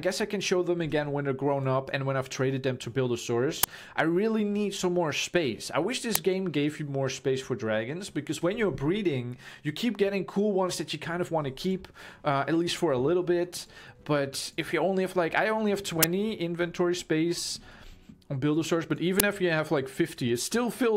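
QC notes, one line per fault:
3.63 s, 6.15 s, 16.03 s, 19.20 s: uninitialised buffer. Each is a loud crack or burst of digital noise where a block was played out before any audio had been written into it, so stale memory was read as samples. The first, second and fourth last about 5.8 ms, which fits a 256-sample buffer. The one at 16.03 s runs about 11.6 ms, which fits a 512-sample buffer. On a spectrogram each appears as a thin full-height stripe. On the waveform each is a hard-edged block of values unrelated to the surrounding audio.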